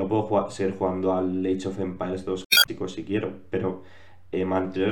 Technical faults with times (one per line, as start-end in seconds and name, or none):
2.42-2.69 damaged data in a compressed stream